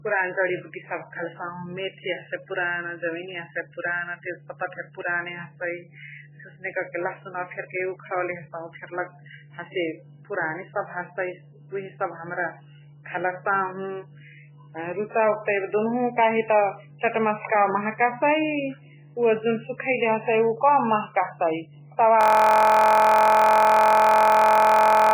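MP3 compression runs through the whole speech clip. Nothing survives above 3 kHz, and the heavy smearing and watery swirl likely come from encoding at a very starved bitrate, which fits roughly 8 kbps, leaving the encoder to drop weak frequency lines frame by frame.

A system hang loop starts at 22.21 s and lasts to the end. A 23.22 ms slice of audio repeats exactly at 43.1 Hz, giving a steady buzz. That fits a 1024-sample buffer cycling endlessly while the computer or driver was frozen.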